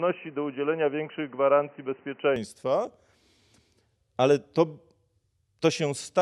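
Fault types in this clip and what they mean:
Input switched to a poorer device: speech sounds dull until 2.36 s, likely a narrower microphone; the spectrogram is empty above 3 kHz, then full bandwidth returns with no gap and a level step of about 5 dB.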